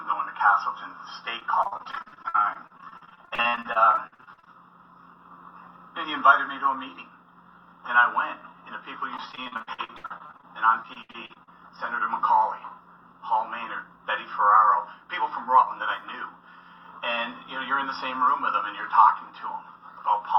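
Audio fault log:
1.39–4.55 s, 9.17–10.45 s and 10.83–11.49 s: repeated packet loss (robotic sound). The audio turns choppy, with rapid dropouts of up to 75 ms patched by stretching the preceding sound. Roughly a third to two fifths of each stretch is filled this way.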